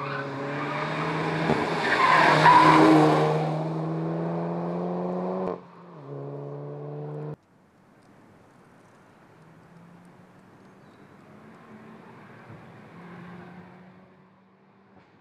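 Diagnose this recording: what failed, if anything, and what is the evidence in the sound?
A fine ticking, like a zip being drawn, rides on the sound from 2.80 to 3.64 s as the level drops by about 10 dB. This is zipper noise: the gain stage lowers level in unsmoothed 1 dB steps, about thirty a second, each step leaving a small click.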